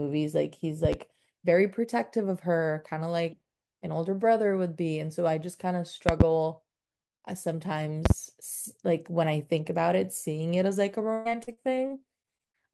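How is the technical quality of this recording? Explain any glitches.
The recording has two kinds of fault: three bursts of loud popping and a stretch of robotic, broken-up speech near the end.

Loud pops occur at 0.85 to 0.96 s, 6.09 to 6.24 s and 8.06 to 8.13 s, each heard as a pair of sharp pops in quick succession. They stand well above the speech, about 15 dB, 25 dB and 20 dB respectively, with the speech continuing underneath. The likely cause is a sudden voltage step or pulse, such as from a connector, switch, static discharge or driver glitch, entering the signal chain, where the following circuitry shapes it into a short transient.

Repeated packet loss (robotic sound) affects 11.13 to 12.56 s. Across this span the audio breaks up about ten times, totalling roughly 400 ms of missing material, with the longest hole 117 ms. Each gap is patched by extending the preceding sound, and about 26% of the span is filled this way. 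Because the holes follow one another closely, the concealment never settles, and the speech comes across as choppy, with fragments dropped out.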